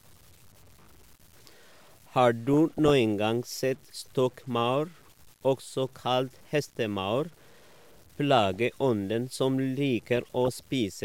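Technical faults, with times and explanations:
Throughout: low bit depth without dither. Quiet stretches of the speech turn grainy and rough, and the decaying ends of sounds sputter between steps rather than fading smoothly. The distortion sits at roughly 30 dB below the signal and rises and falls with it. This is likely the result of truncating to about 8 bits with no dither. Unlike steady hiss, the noise vanishes in pauses and changes character with each sound.
2.53–2.93 s, 8.38–8.57 s and 10.13–10.63 s: DAB burbling. Each burst is a short patch of noisy blips laid over the speech. It happens when weak reception lets a small fraction of a percent of bits slip past error correction, so individual frequency bands jump in level for up to a frame. Low-bitrate swirl runs continuously, and a dropout goes silent. These bursts come and go in clusters while the speech carries on underneath.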